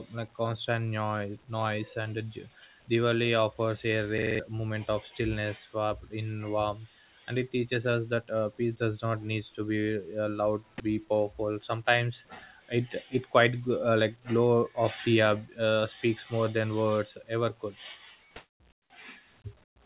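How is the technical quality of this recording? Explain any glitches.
The recording has two kinds of glitch: a brief system hang loop near 4.2 s and three patches of comfort noise in the background near the end. The whole recording is band-limited, with nothing above 4 kHz, as expected from a G.711 call codec.

At 4.18 to 4.40 s, just before "moment of", the playback system froze while the audio hardware kept replaying the last chunk in its ring buffer. A 42.67 ms slice, consistent with a 2048-sample buffer, repeats five times at about 23.4 Hz, producing a rapid, rattling stutter. Roughly a fifth of a second of real audio is lost and replaced by these identical copies.

From 18.36 to 18.60 s, 18.72 to 18.90 s and 19.64 to 19.76 s, the real background, which sits about 36 dB below the loudest speech, is replaced by flat, textureless hiss. The sender likely stopped transmitting during pauses, and the receiver filled the gaps with synthetic comfort noise. 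In the first gap the level jumps up by about 7 dB. In the other two it drops by about 21 and 22 dB. Each switch is a sudden change in the background.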